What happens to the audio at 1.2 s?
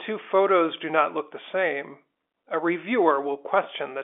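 Nothing goes wrong at 1.2 s: the speech carries straight through that moment intact, with only the narrow 300 Hz to 3.5 kHz band of the G.711 telephone line that shapes it throughout.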